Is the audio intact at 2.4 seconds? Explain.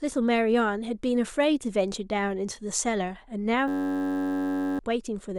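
Yes, the audio is intact at 2.4 seconds, with no fault present at that moment.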